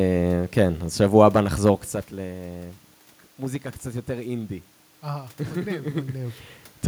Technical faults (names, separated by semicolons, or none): none